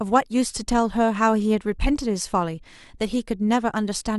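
No technical faults occur at any point in the clip, so there is nothing to describe in time order.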